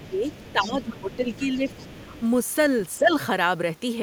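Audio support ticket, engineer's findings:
Other side's voice leaking through: faint second voice at 0.00–0.09, 0.32–0.70, 0.95–1.16, 1.34–1.46, 1.69–2.21 s, about 20–25 dB under speech; likely residual echo. An added voice, not a dip.

Speech suppressed in double talk: talker dips roughly 10 dB at 0.08–0.29, 0.52–1.69, 2.99–3.11 s; likely echo canceller ducking both sides. The talker's own level drops.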